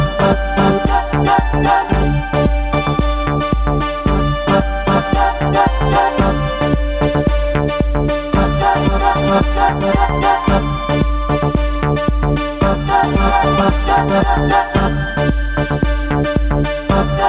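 Gain pumping runs through the whole recording: the gain is pulled down by around 10 dB beneath each loud sound, so dynamics feel squashed and breathing. The likely cause is input gain set far too high with a fast limiter clamping it. On a waveform, the envelope appears flattened, with the noise floor swelling between peaks; a spectrogram, empty above 4 kHz as a narrowband G.711-style call path would be, shows background energy brightening in the pauses.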